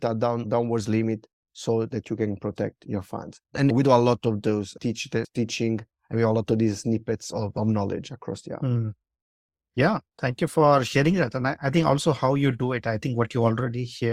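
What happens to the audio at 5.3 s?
Nothing goes wrong at 5.3 s; the speech there plays through intact, with no dropout, click, distortion or other fault.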